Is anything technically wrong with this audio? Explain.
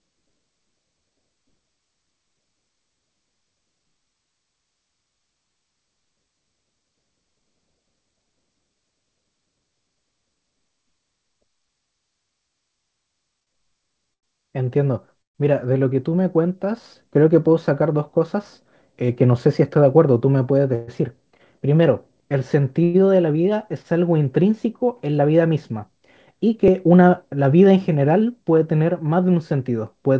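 Yes, the speech has several timing faults from network delivery and playback.

From 13.40 to 14.25 s there are repeated stalls (stutter). Packets kept arriving late, and the jitter buffer ran dry four times, the longest wait 90 ms. About 150 ms was filled by stretching sound, so the speech drags haltingly. A spectrogram shows smeared, held harmonics at each gap.

Call audio freezes occur at 15.22 to 15.37 s, 20.75 to 20.90 s and 22.84 to 22.96 s, holding for about 130, 130 and 105 ms. The likely cause is packets held up in transit, emptying the jitter buffer until delivery resumed. The first fades to 130 ms of silence, a flat line on the waveform. The others hold a fading buzz, visible as a frozen horizontal band.

From 17.28 to 19.86 s a jitter buffer speed-up plays the speech at 104% speed with unchanged pitch. Short pitch-period pieces totalling about a tenth of a second were cut to drain an overfull buffer. 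Syllables look compressed on a spectrogram, but formant spacing stays the same.

From 23.82 to 23.86 s there is a short stall from a late packet. The last sound was stretched for 23 ms until the packet arrived, giving a brief held tone or slight dip. It appears as a short, smooth plateau in the waveform envelope.

At 26.68 s a repeated buffer plays one 4 ms slice twice, which fits a 64-sample buffer. It is heard as a tiny click at the hard join, and shows as a waveform discontinuity and a thin vertical line on a spectrogram.

The call path's G.722 coding leaves nothing above 8 kHz, so the spectrogram is empty above that line.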